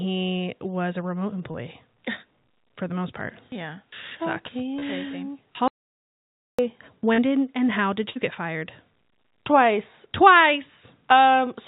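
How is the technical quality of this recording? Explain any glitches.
The recording is a narrowband speech call with several packet-loss glitches and one long silent gap. Its sound stops at 4 kHz, which fits a G.711 A-law call path.

Short concealed packet loss occurs three times: at 1.52 to 1.56 s just after "was a remote", at 4.80 to 4.84 s, and at 7.14 to 7.20 s just before "did and how did". About 20, 20 and 40 ms of audio never arrived. The decoder stretched the preceding sound over each hole and blended back, so each one is a brief smear or wobble.

An audio dropout to silence runs from 5.68 to 6.59 s, about 0.91 s. The sound cuts off mid-flow and returns abruptly, with no room tone in between. The likely cause is a lost input or link while silence kept being written. The waveform shows a dead-flat line, and the spectrogram shows a fully black column with hard vertical edges on both sides.

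A burst of packet loss spans 8.10 to 8.17 s, between "did and how did" and "get fired". About 60 ms went missing in a row. The receiver extended the last sound while fading it, so a held buzz or hiss decays before the speech resumes further on. On a spectrogram, smeared, flattened energy dims across the gap, and the waveform envelope tapers down, then jumps back.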